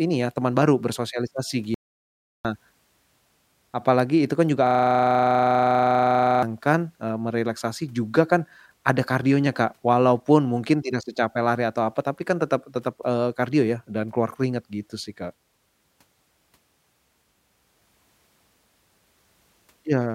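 From 1.74 to 2.45 s the speech cuts to an audio dropout to silence, about 0.70 s of dead silence with no room tone, unlike a gate or fade that leaves some floor. The input link or device likely failed briefly.

From 4.67 to 6.43 s a system hang loop repeats one 40 ms slice about 44 times, a rigid buzzing stutter at 25 Hz. The repetition is identical each cycle, unlike packet-loss glitches, because the frozen driver kept replaying its ring buffer.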